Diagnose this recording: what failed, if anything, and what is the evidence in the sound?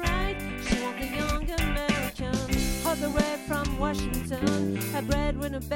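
Nothing in the sound stood out as a failure on listening, so there is no faulty stage to point to and no evidence of one to report.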